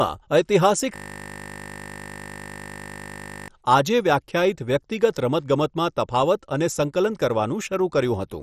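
From the start the audio is dull and granular, with a gurgling edge and nothing above 14.1 kHz, likely heavy MP2 compression at a low rate around 56 kbps. From 0.96 s to 3.48 s a system hang loop repeats one 20 ms piece over a hundred times, producing a steady 50 Hz buzz while the driver stalls.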